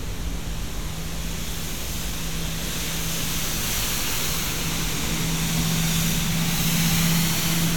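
A recording of everyday sounds, with nothing technically wrong with it.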